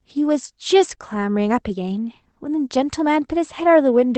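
Short concealed packet loss occurs twice back to back in this speech clip, at 0.95–0.99 s and 0.99–1.02 s, each gap sounding like about 20 ms of missing audio, which fits two consecutive lost 20 ms packets. The receiver covered each hole by extending the preceding sound, continuing its pitch or shaped noise, then crossfading back into the real signal, leaving a brief smear or wobble just under a second in. The call codec path itself, with its top end limited to about 8 kHz, carries the speech as expected.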